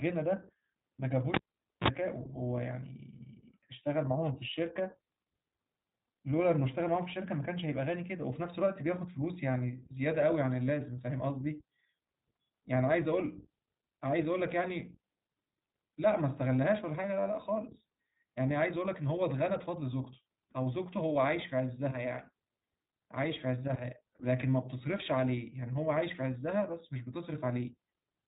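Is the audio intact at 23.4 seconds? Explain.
No, at 23.4 seconds you're hearing the iLBC codec, which affects the whole recording. Each 20 ms frame's excitation is coded on its own, which fits a roughly 15 kbps narrowband stream, so the speech comes out a bit rough and synthetic, with nothing above 3.8 kHz.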